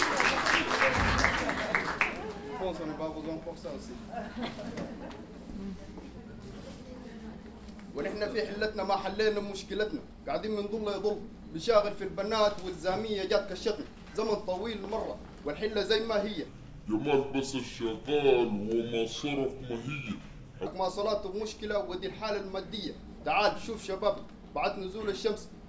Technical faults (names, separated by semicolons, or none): wrong sample rate